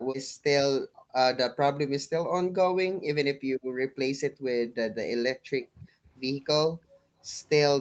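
Background gated by the echo canceller first appears at 0.86 to 1.13 s. While the far end's audio played from the loudspeaker, the canceller pulled the microphone down by about 40 dB, so the room sound vanishes abruptly and returns when it releases. The same gating recurs at 3.65 to 3.75 s, 5.38 to 5.47 s and 6.69 to 7.23 s, the last and longest gap lasting about half a second.

Speech suppressed in double talk occurs at 3.05 to 3.37 s, where the talker's voice falls away by around 40 dB, and more mildly at 5.75 to 5.88 s, with a dip of roughly 15 dB. The likely cause is both sides speaking at once, leaving the canceller unable to tell the near talker from echo, so it attenuated everything.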